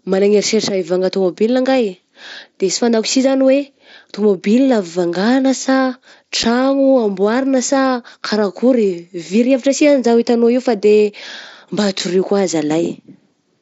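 It's a speech recording carried over a Bluetooth headset link. At 6.43 s and again at 11.99 s the audio drops out for about 7.5 ms, with hard edges. That's unconcealed Bluetooth headset packet loss: a voice packet between headset and phone went missing, and nothing patched over the gap, so silence or an idle pattern sat in its place. Each hole's length fits one lost frame. Through it you can hear the mSBC headset codec's light graininess on louder sounds.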